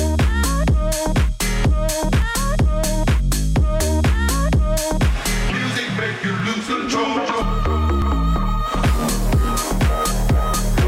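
A likely dropped buffer (overrun), where the program fell behind and the hardware overwrote unread samples, occurs at 2.22, 6.4 and 8.02 s. Each time roughly 20 ms of audio vanishes without a gap, heard as a small jump forward in the sound.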